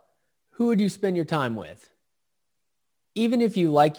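Throughout the speech, crude rate conversion from 48 kHz to 44.1 kHz by picking the nearest sample leaves a gritty, inharmonic fizz some 35 dB below the voice. Unlike steady hiss, it rises and falls with loud, bright sounds.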